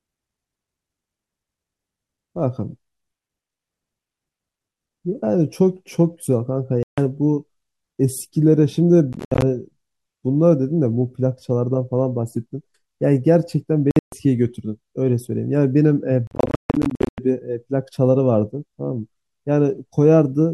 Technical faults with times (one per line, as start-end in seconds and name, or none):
6.83-6.98 Bluetooth dropout
9.13-9.42 Bluetooth dropout
13.91-14.13 Bluetooth dropout
16.27-17.18 Bluetooth dropout